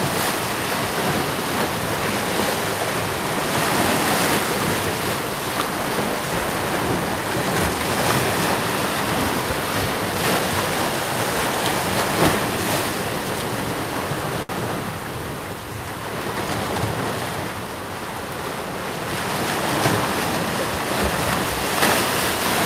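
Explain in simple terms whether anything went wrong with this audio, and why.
Something did go wrong, at about 14.42 s, where the sound briefly hangs before moving on, ending around 14.52 s. This is a short stall from a late packet: a piece of the audio arrived late, so the player held the last bit of sound for about 68 ms until it caught up. Unlike a dropout from a lost packet, nothing is skipped. The sound resumes exactly where it paused, just 68 ms later than before.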